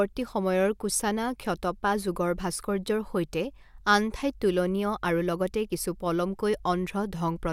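Nothing in the recording stood out as a technical problem on listening.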